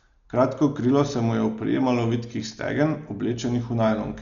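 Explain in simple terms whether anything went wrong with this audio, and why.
Yes, something's off, and it runs through the whole clip. The speech sounds dull and muffled, because there's nothing at all above about 7 kHz, so the crisp top end of consonants is missing. Around the voiced parts there's a rough, fluttery grain. That's likely Dolby Digital compression squeezed hard: to save space, the encoder throws away the highest frequencies and skimps on detail in the rest, and the player fills the gaps with hiss-like noise.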